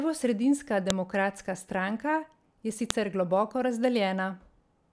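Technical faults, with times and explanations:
0.90 s and 2.90 s, file header played as audio: separate pieces of the stream were joined without removing their WAV headers, so each new piece begins with a few dozen bytes of header data that are read as sample values. Those values bear no relation to the speech, so each produces a sharp, loud click. The two clicks fall 2.0 s apart, matching the length of the pieces, and the second lands just after "stranka je".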